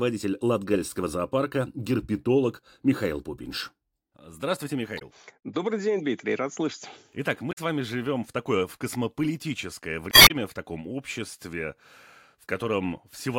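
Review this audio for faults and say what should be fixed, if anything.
Damaged data in a compressed stream shows up as short glitches at 4.97–5.02 s, at 7.51–7.58 s just before "вами живем в такое", and at 10.10–10.31 s between "в такое в космополитическое" and "в таком обществе", which adds 66 ms. The decoder hits bad frames, loses sync and hunts for the next header. Use a checksummed transport and check file integrity before encoding downstream.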